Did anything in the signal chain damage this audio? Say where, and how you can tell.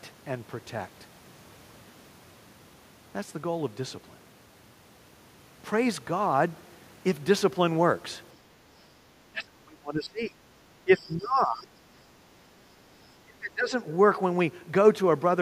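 Yes, the damage comes from call processing. From 9.31 to 10.38 s, 10.83 to 11.71 s and 13.23 to 13.73 s the talker's level falls away sharply, by roughly 20 to 35 dB, with the deepest cut in the last stretch. This pattern is likely speech suppressed in double talk. The echo canceller meets overlapping speech from both ends, cannot tell the near talker from loudspeaker echo, and turns the whole microphone path down.

The background is gated by the echo canceller from 12.2 to 12.41 s. The room tone sinks by about 6 dB for roughly a fifth of a second, then springs back. While the far end played through the loudspeaker, the canceller's suppressor clamped the microphone gain to hold back echo. The ambient sound went down with it and returned as soon as the suppressor released.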